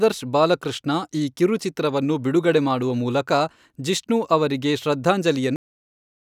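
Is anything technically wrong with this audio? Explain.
Yes. The speech has a cut-off end. At about 5.56 s the audio stops abruptly in the middle of a sound. It falls straight to digital silence, which lasts to the end of the clip. There is no natural decay or fade. This happens when the final stretch of audio is never written out or played back. The recording halts mid-stream instead of finishing cleanly.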